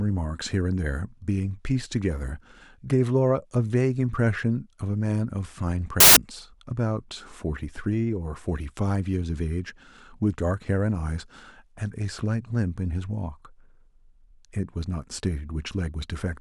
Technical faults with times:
6.00-6.16 samples built from the wrong bytes

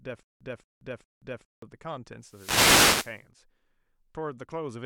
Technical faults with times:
0.00-1.62 stutter with silent gaps
2.22-3.26 wireless microphone noise hit

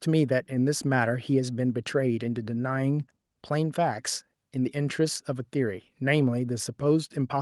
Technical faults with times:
none

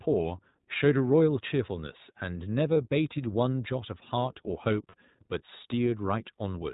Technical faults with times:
0.00-6.74 iLBC codec
2.74-2.77 lost iLBC frames
4.89-4.95 lost iLBC frames

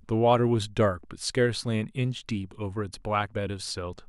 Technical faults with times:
none

